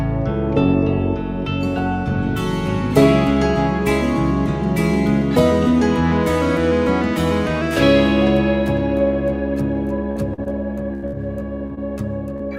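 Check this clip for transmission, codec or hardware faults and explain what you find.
Packet loss affects the last two and a half seconds of the clip, in two forms.

Short concealed packet loss occurs at 10.11, 10.34, 10.44, 11.67, 11.75 and 12.37 s. Each time, 20 to 40 ms of audio failed to arrive. The receiver extended the preceding sound and blended back, leaving a brief smear or wobble rather than a held, fading tail.

A burst of packet loss occurs at 10.94 to 11.05 s and again at 11.07 to 11.15 s, losing 80 ms and 60 ms. Here the concealment runs longer and is turned down as it goes, producing an audible sustained buzz or hiss that fades. The audio then resumes with material missing, which separates it from the quick smears.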